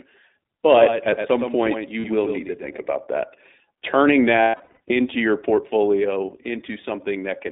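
The whole clip has passed through the iLBC codec. The band runs only from about 250 Hz to 3.7 kHz, so the speech sounds thin and boxed-in. There is a clearly audible rough, slightly synthetic edge on voiced sounds, which fits the 15.2 kbps mode with 20 ms frames. Each frame's excitation is coded on its own rather than predicted from the last, and at this rate that independence costs some smoothness.

From 0.75 to 2.93 s a doubled audio track is present. A second, full-band copy of the same speech sits roughly 100 ms behind the original and about 5 dB quieter. It has no reverberant tail or room colouring, and it cuts in and out abruptly at both ends. That points to a duplicate capture path or a misaligned edit, likely a slower second route into the mix, rather than any acoustic echo.

Inside that stretch, from 2.00 to 2.06 s, there are lost iLBC frames. About 40 ms is missing, consistent with two 20 ms frames. 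The decoder fills the gap by repeating the last pitch period with added noise, which gives a brief held, buzzy vowel. Because frames decode independently, the speech snaps back immediately.

A heavier loss of iLBC frames runs from 4.36 to 4.97 s. Across that 600 ms, about 380 ms is concealed in scattered bursts, the longest roughly 100 ms, which fits about nineteen frames. The sound stutters between real speech and breathy, fading sustained tones.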